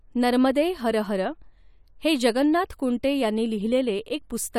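A short speech recording with no technical faults to report: the signal is continuous and intact throughout, with no breaks, level problems or added disturbances anywhere in it.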